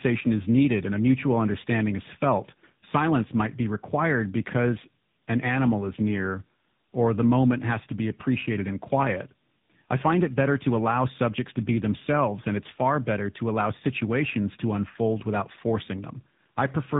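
Speech carrying tandem speech coding throughout, with nothing above 3.8 kHz. The sound fits two narrowband speech codecs in series, the second re-coding the first's decoded output, so it is rougher and more warbly than one codec alone, not merely band-limited like a simple low-pass filter.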